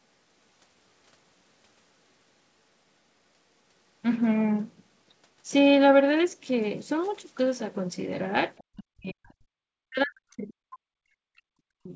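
An echo canceller that likely mistook the talker for returning loudspeaker echo while both sides spoke at once clamps the speech down, giving speech suppressed in double talk. From 8.59 to 9.34 s the speech drops by around 40 dB into near silence, and again from 9.7 to 11.6 s it drops by around 40 dB for about two seconds. A shallower dip of about 10 dB follows at 11.83 to 11.94 s, all within the 8 kHz band of the G.722 call path.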